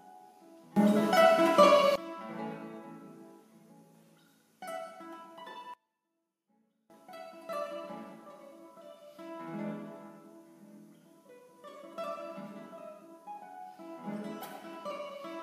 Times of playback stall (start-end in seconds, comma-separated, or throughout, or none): none